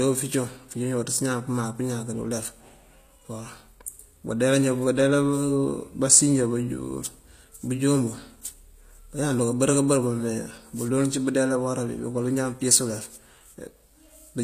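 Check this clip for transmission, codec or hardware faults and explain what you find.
One codec fault runs through the speech. HE-AAC compression, throughout: the treble is likely rebuilt by spectral band replication, giving gritty, metallic s sounds, fitting roughly 24 kbps, with nothing above 14.9 kHz.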